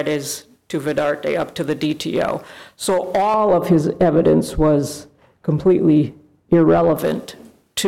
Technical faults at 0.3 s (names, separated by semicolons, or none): none